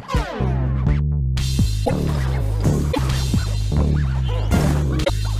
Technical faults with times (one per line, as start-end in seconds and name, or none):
1.84-1.91 broken MP3 bit reservoir
2.91-2.98 broken MP3 bit reservoir
5.03-5.10 broken MP3 bit reservoir